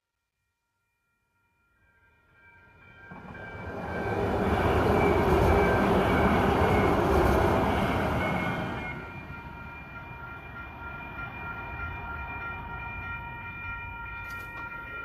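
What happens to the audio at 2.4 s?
At 2.4 s the audio is inside a fade-in with truncation distortion, which runs from the start to about 4.6 s. The fade stage keeps only about 12 bits and adds no dither, so at low levels the waveform collapses into a few coarse square steps. The worst grit lasts until 2.18 s. At 2.4 s the level has risen just past that, but it still sounds rough and granular until the fade completes.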